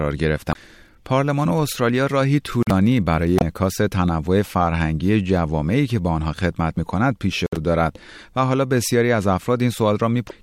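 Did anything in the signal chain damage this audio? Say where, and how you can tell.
Yes. The speech breaks up briefly twice, from 0.49 to 0.53 s and again from 3.37 to 3.42 s, each a short disruption of about 40 to 50 ms that comes across as a chirp, click or brief gap. This points to damaged data in a compressed stream at the codec or storage stage. Corrupted bytes left the decoder unable to read those frames correctly, so it lost sync and had to find the next valid frame header before normal decoding resumed.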